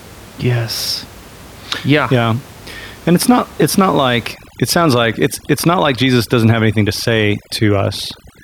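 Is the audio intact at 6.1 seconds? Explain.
No, 6.1 s sits inside a stretch of overdone noise removal running from 4.34 s, right after "it's not it's not", to the end. The reducer is cutting any band near its noise estimate, so the room noise drops and breaks up into twinkling, warbling specks.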